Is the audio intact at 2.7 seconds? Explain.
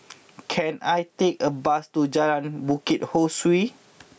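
No. At 2.7 seconds the speech is caught in gain pumping, which runs through the whole clip. The level swings by around 20 dB. Loud and soft parts sit closer in level, and the sound is squashed. A fast limiter fighting excessive gain is the likely cause.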